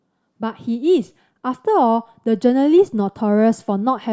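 No technical faults can be heard anywhere in the speech recording.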